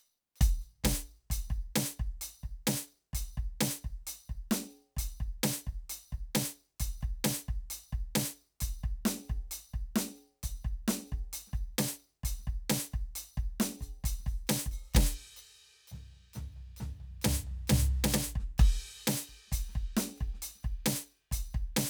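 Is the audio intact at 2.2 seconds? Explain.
Yes, the music at 2.2 seconds is intact, with no dropout, glitch or other technical fault at that moment.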